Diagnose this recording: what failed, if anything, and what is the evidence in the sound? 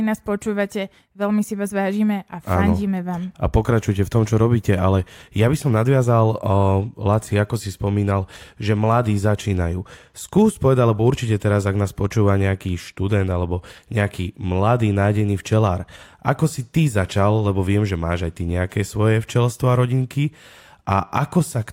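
Nothing in this speech recording points to a failure at any stage of the chain. No fault can be heard, so there is no evidence to place in time and no mechanism to explain.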